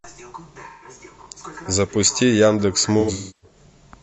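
From 0.69 to 0.89 s the speech turns briefly smeared and noisy, a phasey blur of about 128 ms that fits roughly three lost frames. This is AAC frame loss with concealment. The decoder never received those frames, so it rebuilt the gap from the last good spectrum, reshuffling its signs and carrying its energy forward. The result is a hazy stand-in rather than silence.

At 1.22 to 1.26 s there is a quick jumbled moment. This comes from chunks out of order. A 20 ms chunk arrived one chunk late and played after the piece that should have followed it. No audio is missing, but the wrong order leaves three hard joins.

The same AAC frame loss with concealment returns from 2.99 to 3.57 s, and this time it is more severe. About 384 ms is lost, spread over roughly 0.43 s, with the longest unbroken stretch around 0.3 s. Over that longer gap the concealed sound decays toward silence and then fades back in.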